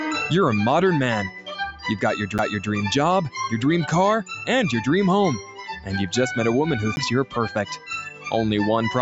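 The audio, which has passed through a call's microphone processing with nothing above 8 kHz, contains two CD skips, at 2.38 s and 6.96 s. Each is a short tick with a mute of roughly 10 ms or less, after which playback carries on from a different point. This happens when a knock or a disc flaw throws the laser onto another turn of the spiral, so the player briefly silences output and resumes reading from the wrong track position. Between 5.43 s and 5.59 s, the sound is cut by the noise suppressor. For roughly 150 ms the level sinks by up to about 7 dB more than the surrounding material, because the suppressor classified that stretch as noise and attenuated it.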